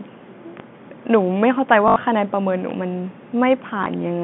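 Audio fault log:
0.60 s and 2.71 s, DC step: at each point the waveform's zero line suddenly jumps, and you hear a low thump or click while the talking carries straight on over it. The offset doesn't hang around. It bleeds away the way a 20 Hz high-pass would pull it back, so each one is a brief dull knock rather than a lasting shift. Two separate jumps, same character both times.
1.88 to 1.96 s and 3.84 to 3.86 s, packet loss with last packet repeated: audio went missing and the receiver kept replaying the last chunk it had until fresh data arrived. The first gap is 80 ms, which sounds like four 20 ms packets looped, giving a short robotic buzz around 50 Hz. The second is a single 20 ms repeat, just a small blip, all inside the 150 Hz to 3.5 kHz telephone band.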